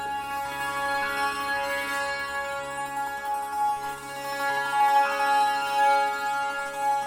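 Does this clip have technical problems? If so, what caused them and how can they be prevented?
No, there are no technical problems to report in this clip. Since nothing went wrong, there is no cause to identify and nothing that needs preventing.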